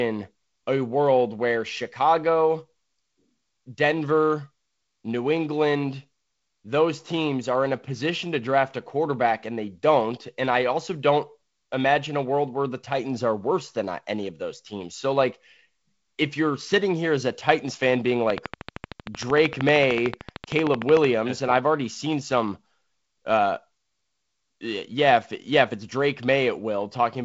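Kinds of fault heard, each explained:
Train of clicks: Something in the chain, likely interference from nearby equipment or a faulty connection or power supply, injects a short pulse at a steady 13.1 times per second from 18.30 to 21.05 s, between "fan being" and "and I've already seen". This produces about forty near-identical ticks in an even rhythm, peaking roughly 15 dB above the speech and standing out sharply against the G.722-coded sound, which carries nothing above 7.8 kHz.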